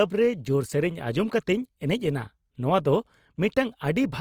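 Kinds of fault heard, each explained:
Opus compression: the speech sounds rough, grainy and noise-filled yet stays full-band to about 20.3 kHz, likely from Opus music-mode coding near 24 kbps.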